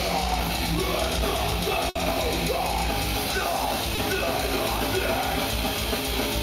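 The audio has a burst of packet loss at 1.89 to 1.97 s: about 60 ms is replaced by a fading continuation of the preceding sound, seen as smeared, decaying energy before the signal resumes further on. At 3.95 s a short concealed packet loss patches 20 ms with extrapolated sound, showing as a brief blurred stripe before it blends back into the real audio.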